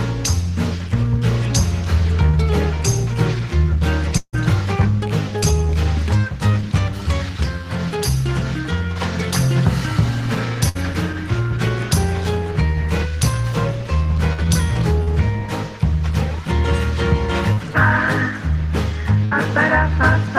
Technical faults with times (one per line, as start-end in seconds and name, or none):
4.17-4.35 long network dropout
5.39-5.44 short concealed packet loss
10.69-10.77 burst of packet loss
14.33-14.46 burst of packet loss
15.03-15.09 short concealed packet loss
17.53-17.59 short concealed packet loss
19.25-19.33 burst of packet loss